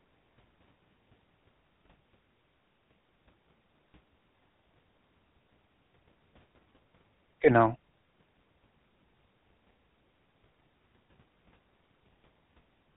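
From start to finish the speech has passed through a GSM full-rate codec, whose coarse sound fits its 13 kbps rate. It models the vocal tract from a sparse pulse excitation and drops everything above 4 kHz, giving a muffled, plainly buzzy, gravelly roughness throughout.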